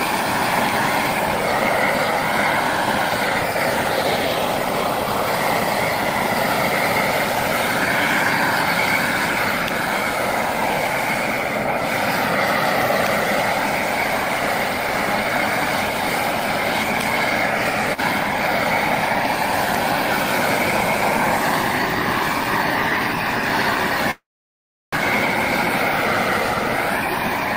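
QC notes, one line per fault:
24.11–24.95 s, call audio freeze: the sound stops moving forward and the last fragment is stretched into a short fading buzz that drops to silence for about 0.7 s of the 0.82 s pause. Audio then resumes exactly where it left off, so nothing is lost, but everything after runs 0.82 s later. This likely comes from packets being held up in transit until the receiver's jitter buffer ran empty and it had to fill the gap itself.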